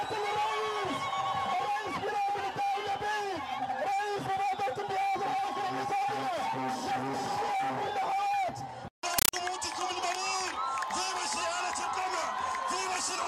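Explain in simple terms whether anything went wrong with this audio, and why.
Yes. From 9.18 to 9.33 seconds the sound is replaced by very loud, chattering static. This is a compressed stream played as audio. Undecoded Dolby Digital data is heard as raw samples, giving 8 ms noise bursts about 31 times a second.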